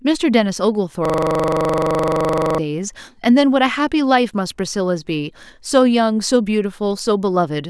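From 1.05 to 2.58 s there's a system hang loop: the system froze, replaying one 42.67 ms slice as a 23.4 Hz buzz, which fits a 1024-sample buffer.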